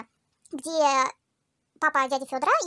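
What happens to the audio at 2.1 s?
At 2.1 s the speech sounds high and hurried, pitched up by about seven semitones, roughly a fifth, and running half again too fast, as it does for the whole clip. The cause is a wrong sample rate: the samples are played faster than they were captured, with no conversion, so pitch and tempo rise together by the same factor of 1.5, which fits 16 kHz audio played back at 24 kHz.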